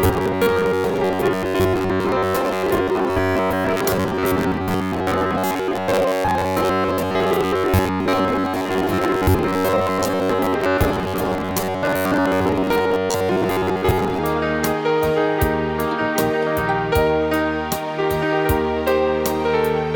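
From 0.01 s to 14.2 s the audio has a robotic sound from repeated short buffers, a rigid metallic buzz at 93.8 Hz, most likely from starved playback looping roughly 10.7 ms chunks. On a spectrogram, evenly spaced harmonic lines appear; on the waveform, identical repeating cycles.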